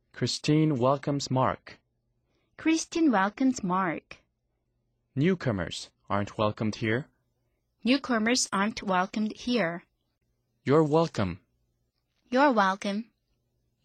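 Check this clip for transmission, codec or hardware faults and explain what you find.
The clip has one fault: pre-emphasis left on. From 6.83 s, right after "aren't welcomed", to the end at 13.84 s, the treble is boosted by about 13 dB at 10 kHz relative to 1 kHz. The rising curve fits the standard 75 µs FM pre-emphasis, applied without the matching de-emphasis on playback. The speech turns thin, bright and hissy on sibilants. Unlike aliasing or added hiss, nothing new appears; existing high frequencies are simply lifted along a smooth slope.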